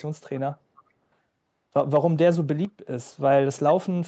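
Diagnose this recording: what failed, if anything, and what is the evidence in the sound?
Sudden gain jump at 2.65 s: speech and background noise drop together by about 9 dB until 2.87 s, likely an unramped digital gain step.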